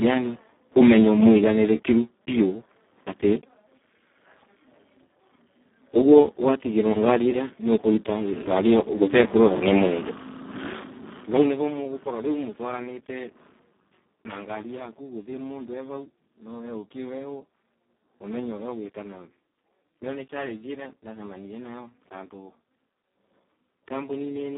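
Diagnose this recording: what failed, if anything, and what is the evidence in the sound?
The failure is at the codec stage: Speex speech compression throughout, heavily damaged, at a rate that sounds like roughly 4 kbps. The speech is hoarse, noisy and edging toward robotic, because the CELP coder has too few bits to model the excitation. The band runs from about 250 Hz to 3.6 kHz, with nothing above 3.8 kHz. On a spectrogram this appears as a hard ceiling, with smeared, grainy harmonics below it.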